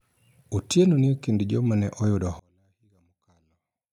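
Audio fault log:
2.39–3.93 s, one channel inverted: right after "ekind joma ne oyudo" the speech drops by about 37 dB to a faint trace until the end. The likely cause is reversed polarity on one stereo channel, so centred content cancels in the mono sum.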